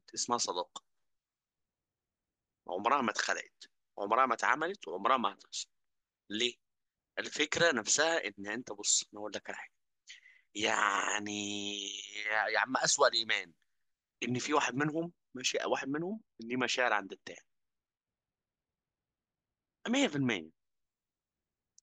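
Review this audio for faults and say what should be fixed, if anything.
De-emphasis applied wrongly, from 15.48 to 20.62 s: the speech turns dull and muffled because a treble-cut curve meant to reverse pre-emphasis was applied where none existed or was applied twice, leaving the highs rolled off smoothly by about 8 dB at 10 kHz relative to 1 kHz. To prevent it, confirm whether the source was actually pre-emphasised before enabling any de-emphasis stage, and make sure only one stage is active in the chain.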